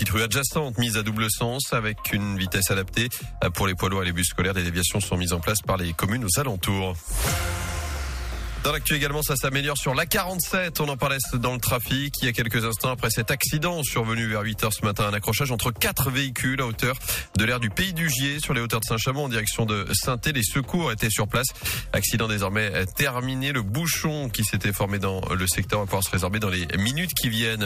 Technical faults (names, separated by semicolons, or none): block size mismatch (padded)